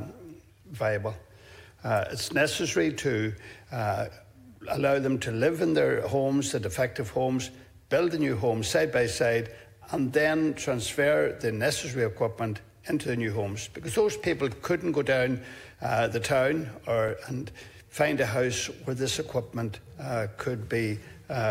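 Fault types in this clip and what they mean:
Block of digital silence: at 17.08 s the audio drops to silence for about 5 ms and then resumes, with no fade on either side, so it reads as a single sharp tick rather than an audible hole. On the waveform it shows as a short flat line near silence, with abrupt steps at both edges. On the spectrogram it appears as a thin vertical broadband stripe, with a brief blank gap between the two edge clicks.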